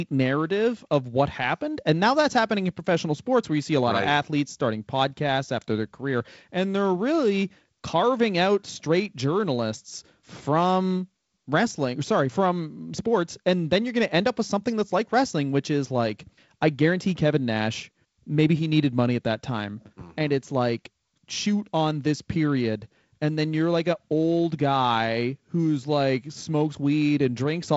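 No technical fault can be heard; the speech arrives over G.722 wideband telephone coding, with nothing above about 7.7 kHz and a light coding hiss consistent with the lower 48 kbit/s mode.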